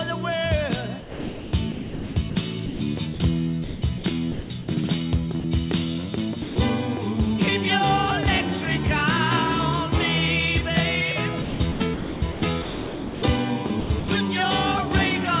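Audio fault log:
1.00–4.68 s and 11.42–14.08 s: sound chopped by the voice detector. In each span the audio keeps breaking off, with about 1.7 s and about 1.4 s respectively replaced by comfort noise, likely because the sender's detector repeatedly toggled transmission.
5.40 s and 6.42–6.56 s: sound dropped by the voice detector. Brief gaps of 40 ms and 140 ms give way to steady comfort noise before the audio resumes, likely because the detector misjudged quiet material as background. Throughout, nothing above 4 kHz is present on the narrowband call path.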